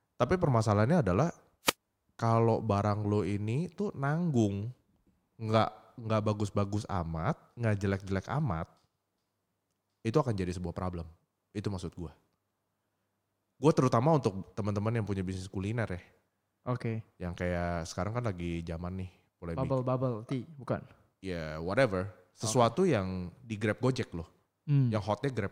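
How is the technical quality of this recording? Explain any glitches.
One glitch is audible. From 1.64 to 1.74 s, a wireless microphone noise hit occurs. The radio signal briefly fades, so receiver noise rises into a short static swish over the speech.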